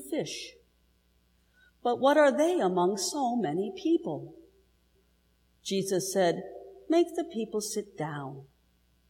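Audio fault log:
No faults detected in this audio.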